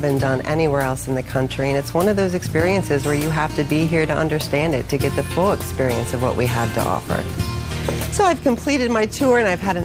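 No technical faults can be heard anywhere in this audio; the signal stays continuous and steady throughout.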